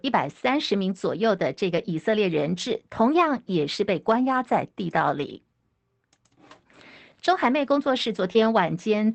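Speech carried over an Opus call path at 24 kbps, band-limited to 8 kHz, with two kinds of packet-loss damage. The first is a lost packet rebuilt from error correction, at 1.77–1.83 s, 5.17–5.23 s and 8.35–8.37 s. At each point the decoder substituted the low-bitrate redundant copy carried in the following packet, so there is no gap, only a brief coarser, noisier stretch. The first two patches last 40 ms, consistent with two separate 20 ms packets, and the third lasts 20 ms, fitting a single packet. The second is a short concealed packet loss spanning 8.33–8.45 s. About 20 ms of audio never arrived. The receiver extrapolated the preceding signal for 12 ms and then crossfaded back into real audio. That leaves a short smear or wobble, and the playout was stretched by roughly 20 ms.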